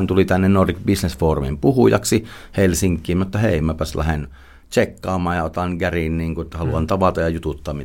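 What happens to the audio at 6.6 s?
Nothing goes wrong at 6.6 s; the audio there is intact, with no dropout, click, glitch or other fault at that point.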